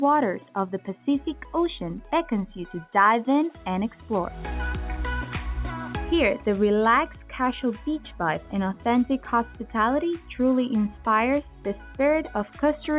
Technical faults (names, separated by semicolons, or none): none